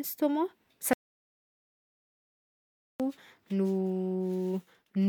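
At 0.93 s the speech cuts to an audio dropout to silence lasting 2.06 s until 3.00 s, likely lost input written as silence; the waveform goes flat and the spectrogram blank.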